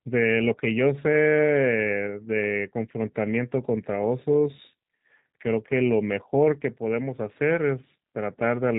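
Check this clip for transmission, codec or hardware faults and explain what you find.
One codec fault runs through the whole clip. G.729 coding is present from start to finish. The speech is rebuilt from a vocal tract filter, a pitch predictor and a few pulses per frame, which fits an 8 kbit/s G.729A stream. The damage is plainly audible as rough, synthetic speech. On a spectrogram, energy stops sharply at 3.8 kHz.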